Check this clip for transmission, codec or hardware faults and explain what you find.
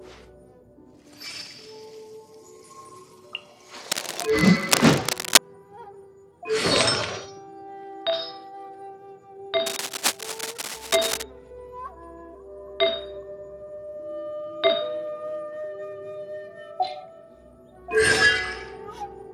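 Cable scratch noise appears twice, from 3.91 to 5.38 s at roughly the level of the sound, then 9.66 to 11.23 s about 5 dB lower, likely a worn connector shifting and rapidly varying contact resistance, producing dense, irregular scratching bursts.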